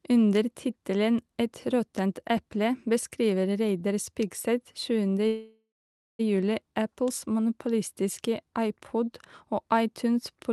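From 5.27 s to 6.21 s the speech stops and a call audio freeze fills the gap. For about 0.92 s the receiver carries the last sound forward as a fading buzz or hiss that settles into roughly 0.55 s of silence, the likely result of packets stalling in transit until the jitter buffer ran dry. When the speech resumes it picks up exactly where it broke off, with nothing lost, but everything after arrives about 0.92 s later.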